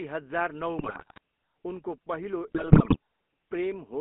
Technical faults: GSM full-rate codec; GSM bit errors

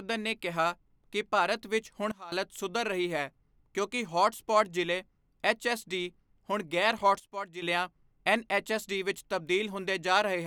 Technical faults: sudden gain jump

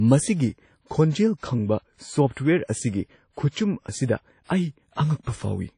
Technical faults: WMA compression

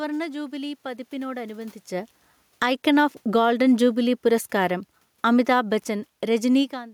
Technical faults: automatic gain falling; automatic gain rising

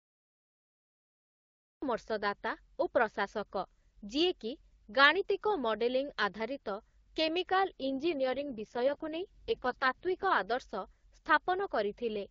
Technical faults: cut-off start; AMR rate drop

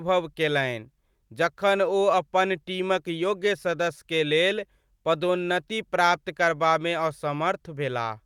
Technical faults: none

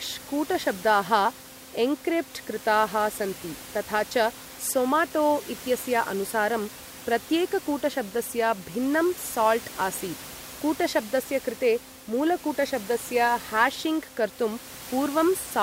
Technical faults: none

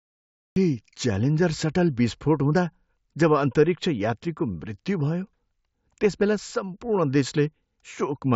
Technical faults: cut-off start

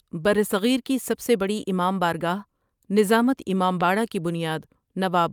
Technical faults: loud pop

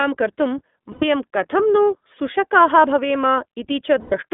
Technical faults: iLBC codec; lost iLBC frames

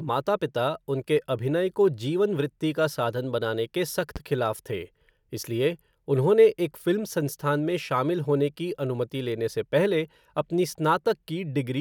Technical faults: loud pop

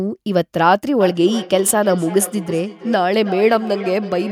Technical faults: feedback echo between two devices

